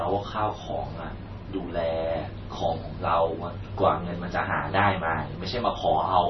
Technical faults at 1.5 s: MP3 compression

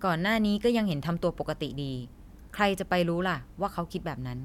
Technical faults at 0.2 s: none

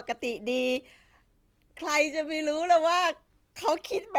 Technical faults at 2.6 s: Opus compression

